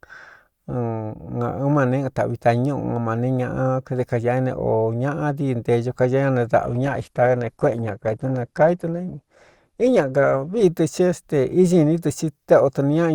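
At 6.63 s the speech suddenly thins out: the adaptive stream drops to a lower bitrate for four seconds, until 10.63 s. Nothing comes through above 12.2 kHz and artefacts rise, consistent with a fall from roughly 64 to 16 kbit/s Opus.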